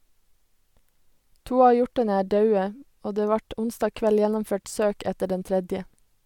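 A speech recording with no audible technical faults.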